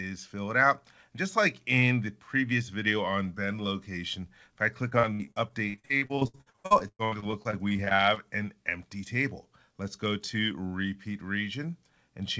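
From 4.90 to 8.18 s the audio breaks up into repeated packet loss, heard as a choppy, robotic stretch. Dozens of short holes, the longest about 110 ms, are each patched by stretching the preceding sound, so roughly a third of that span is filled-in tone rather than real signal. A single dropout would leave one isolated gap. Here the rapid succession gives a choppy sound with pieces missing. The G.722 call path limits content to below 8 kHz throughout.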